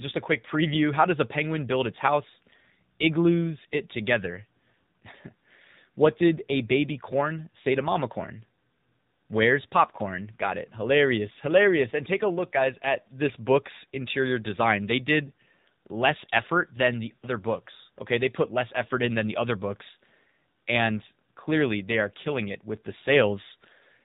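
Throughout the speech, AMR narrowband mobile coding discards everything above 4 kHz and rebuilds the voice from a vocal-tract model driven by sparse pulses. The result is a muffled, buzzy, synthetic tone that fits the low 7.4 kbps mode.

At 15.26 s, just before "less effort than the", lost AMR speech frames force the decoder to repeat its last pitch and vocal-tract settings at reduced gain. The 20 ms loss, consistent with one dropped frame, causes a brief dip or warble.

From 17.16 to 17.25 s, just after "less effort than the", a longer 60 ms gap, about three frames, makes the concealed sound stretch out and fade toward silence. The voice then returns weak or rough for a moment.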